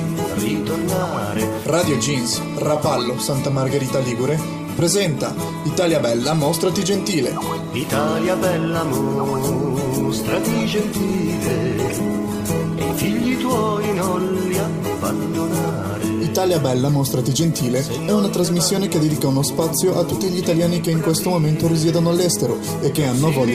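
From 9.31 to 14.11 s a call bitrate drop coarsens the encoding, turning the sound rough and watery for about 3.5 s, consistent with 48 falling to 17 kbps.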